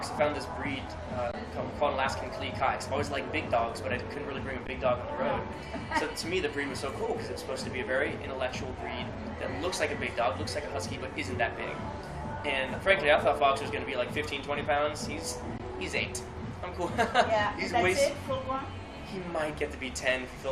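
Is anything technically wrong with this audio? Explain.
Yes. Three brief freezes at 1.32 to 1.34 s, 4.67 s and 15.58 s, each 15 to 20 ms, sound like tiny stalls with only a soft resume. This is an underrun with held sample: the output buffer emptied, the converter held its last value, and playback resumed where it stopped, with essentially nothing lost.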